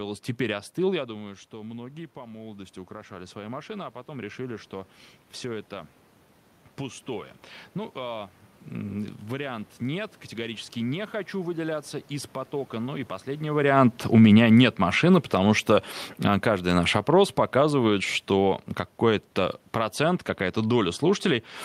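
Around 1 s the talker drops back about 15 dB, and automatic gain rising kicks in from 1.06 to 6.0 s, pulling things up by about 8 dB, so voice and room noise swell together and only part of the level returns. Then, after "и последний", the talker moves around 13.5 s and automatic gain falling sets in from 13.53 to 15.66 s, cutting about 4 dB, sinking voice and background together before "а каждый наш опрос".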